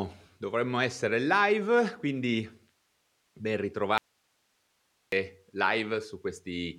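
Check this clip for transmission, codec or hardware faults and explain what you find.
One fault is present: an audio dropout to a faint residue. From 3.98 to 5.12 s the speech cuts out abruptly for about 1.1 s, leaving only soft hiss roughly 45 dB below the signal, before snapping back. The likely cause is a brief loss of the incoming signal while the downstream path stayed live.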